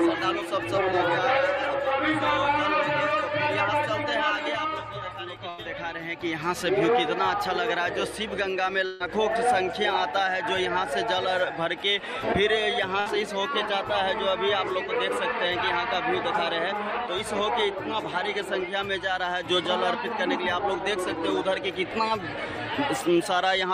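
Three bursts of packet loss interrupt the audio at 5.49–5.60 s, 8.86–9.02 s and 13.00–13.08 s. The receiver stretches the last sound into a fading buzz or hiss for roughly 85, 140 and 60 ms, then skips ahead. On a spectrogram each gap appears as smeared horizontal bands followed by an abrupt jump.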